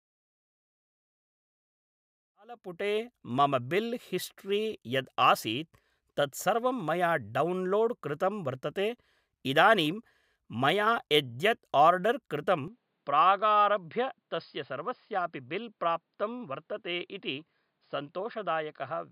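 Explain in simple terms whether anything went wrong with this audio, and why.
At 12.68 seconds the speech suddenly turns duller and a bit quieter, and stays that way to the end. This sounds like an input switched to a poorer device, likely a different microphone. Nothing above 5 kHz gets through afterward. The fade-in near 3 seconds is deliberate.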